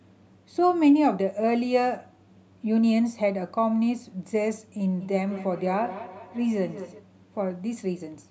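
From 5.0 to 7.1 s the speech picks up a feedback echo between two devices. Each word returns roughly every fifth of a second, about 15 dB below the speech. A second device is replaying this one's sound, and this one's microphone picks it up again.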